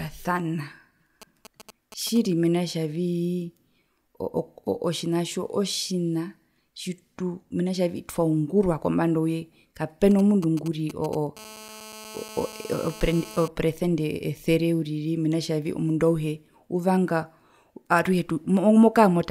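A nearby 2G phone, picked up and rectified by the audio circuit, interferes with this speech recording. Its signalling activity produces GSM signalling bursts, galloping ticks and brief 217 Hz buzzes, from 1.22 to 2.18 s, roughly 20 dB below the speech, and again from 10.11 to 11.39 s, around 15 dB down. Once the phone enters a call, its continuous transmission causes GSM phone buzz, a steady, raspy 217 Hz tone rich in harmonics, from 11.39 to 13.48 s at about 18 dB below the speech.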